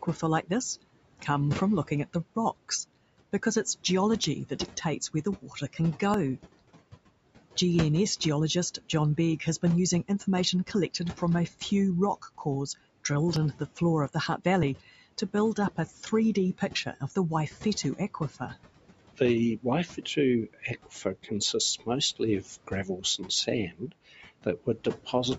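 Throughout the clip, a noise suppressor pulls down whatever bands it judges to be steady noise by about 17 dB, frame by frame. These noise suppressor artifacts make the room noise, about 17 dB under the speech, sink between words and surge back beneath them.

At 0.60 s and 4.24 s, the recording program likely failed to read its samples before the hardware overwrote them. These are dropped buffers (overrun): roughly 10 ms of audio disappears each time, and the two edges are butted together, so the sound jumps forward with no gap of silence.

From 5.14 to 6.02 s the suppressor mistakes parts of the speech for noise. This is speech cut by the noise suppressor: about 200 ms in total is pushed down as far as about 12 dB, leaving soft sounds and word endings swallowed. At 6.14 s another dropped buffer removes about 40 ms, a longer jump than the others.

The same speech cutting returns four more times:

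8.78 to 12.46 s, about 200 ms affected, down to about 11 dB.
13.53 to 14.41 s, about 100 ms affected, down to about 11 dB.
15.21 to 17.12 s, about 150 ms affected, down to about 13 dB.
19.14 s to the end, the most extensive stretch, about 1.5 s affected and down to about 17 dB.

Dropped buffers of about 10 ms each also fall at 13.36 and 14.63 s.

The call microphone processing's high-pass filter trims the lowest bass, as it is designed to.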